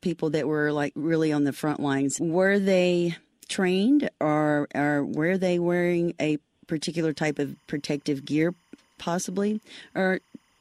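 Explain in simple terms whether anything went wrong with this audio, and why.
From 7.09 s until the clip ends at 10.60 s, a faint chirping warble sits quietly behind the speech. This is timecode bleed: a synchronisation signal from a nearby track or cable has leaked into the recording. Its rapid flip between two pitches, around 1 and 2 kHz, repeats in a regular pattern that fits 25-frame timecode. A plain electrical whine holds one steady pitch; this sound keeps jumping between two.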